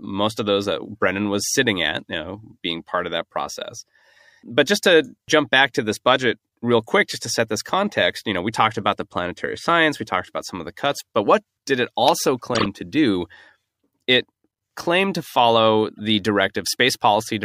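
Speech with two corrupt frame decoded faults: a loud burst, peaking around -5 dBFS, at 12.54–12.66 s and a faint blip at 15.97–16.00 s, where damaged frames were decoded with misplaced spectral energy.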